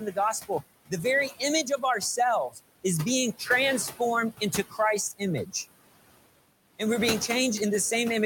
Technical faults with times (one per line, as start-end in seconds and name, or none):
0.00-8.26 noise suppressor artifacts
2.50-2.59 speech cut by the noise suppressor
4.32-4.79 speech cut by the noise suppressor
5.45-5.54 speech cut by the noise suppressor